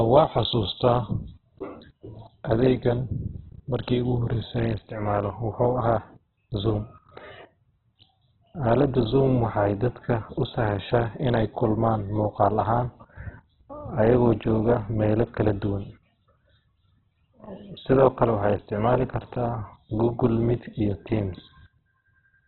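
Opus compression throughout the speech: nothing above 4.1 kHz, remaining tones rough and grainy, likely music-mode Opus noise-filling starved bands at around 8 kbps.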